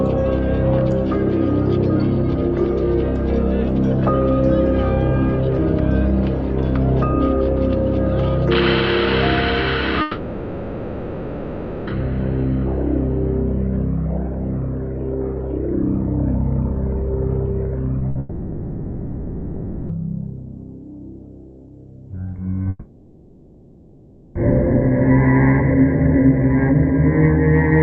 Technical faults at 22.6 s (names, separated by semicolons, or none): short concealed packet loss; long network dropout